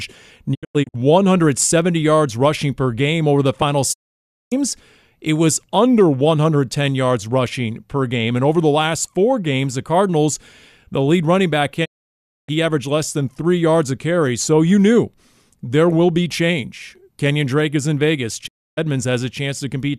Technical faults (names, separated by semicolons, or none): digital broadcast dropout